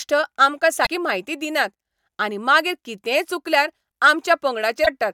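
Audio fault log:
0.82–0.87 s and 4.82–4.88 s: damaged data in a compressed stream. Corrupted bytes in the encoded speech make the decoder misread frames and lose sync while it hunts for the next valid frame header, producing brief blips of about 50 ms each.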